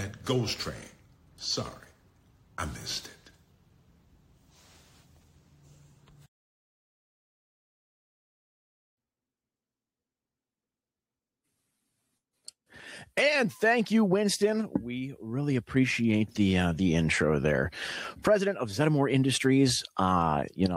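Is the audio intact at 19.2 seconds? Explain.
Yes, at 19.2 seconds the audio is intact, with nothing disrupting the sound at that moment.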